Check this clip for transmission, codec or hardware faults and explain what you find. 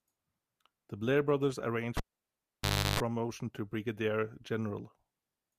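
One hardware fault: the cable was pulled and plugged in between 1.97 and 3.00 s, after "brothers arranged" and before "to brigadier". Removing the live lead gives a pop and about 0.98 s of near silence. While only the plug tip made contact, about 0.34 s of 50 Hz mains buzz came through, and a second pop marks the connection closing.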